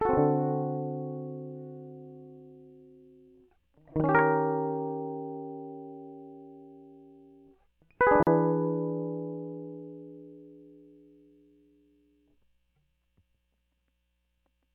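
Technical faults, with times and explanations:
8.23 to 8.27 s, gap at a join of encoded pieces: the music drops out for about 40 ms, then carries on exactly where it left off. Two separately encoded sections were joined without trimming, so one encoder's start-up delay and the other's padded final frame both remain as silence. Unlike a dropout or packet loss, no music goes missing and nothing is concealed or repeated. The gap is a clean hole whose edges the codec softens.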